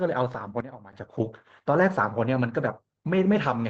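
At 0.33 s and again from 1.21 to 1.23 s, a lost packet was rebuilt from error correction. Each 20 ms stretch, pointing to a single lost packet, was filled from the next packet's low-bitrate copy, so there is no gap, only a brief rougher, noisier patch.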